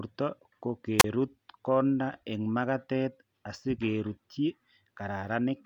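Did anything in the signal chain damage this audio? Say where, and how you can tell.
Yes, a wireless microphone squelch dropout in the radio link ahead of the converter. Around 0.98 s there's a quick lift in hiss, then about 33 ms of near silence before the speech returns at 1.04 s. The carrier faded, so the receiver's squelch muted the output.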